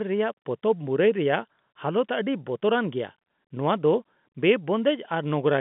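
No technical faults in this speech clip: it carries the band-limited sound of a telephone line running from about 150 Hz to 3.6 kHz, which fits standard 64 kbps G.711 mu-law telephone coding.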